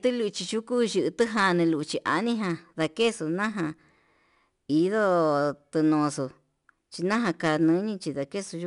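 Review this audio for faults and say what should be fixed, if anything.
4-bit ADPCM compression affects the whole speech clip. Each sample is coded as a small step from a predicted value, so a plainly audible gritty hiss rides on every loud passage and rises and falls with it. Steady low-bit quantisation noise would not track the level this way. Nothing sounds above 10.6 kHz, which fits a stream of about 89 kbps. To prevent this, keep an uncompressed master and use a higher-quality codec for delivery.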